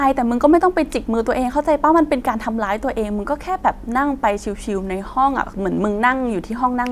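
Listening to the speech closely, nothing stood out as a technical problem at any point.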